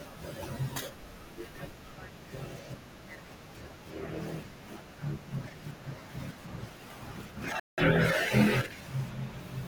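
At 7.60 s the speech drops out completely. Silence holds until 7.78 s, a gap of about 182 ms, and then the audio returns. This is a Bluetooth stall. The likely cause is radio interference delaying packets on the wireless link. The headphones' buffer empties while it waits. With nothing left to play, output stops dead. Playback only restarts once the retransmitted packets arrive. The result is a clean, abrupt hole in the speech rather than a fade.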